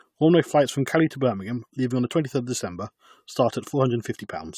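Throughout, the speech sounds swirly, smeared and hollow, with blurred attacks. This is likely generation loss, fitting about four re-encodes through AAC-LC at 96 kbit/s.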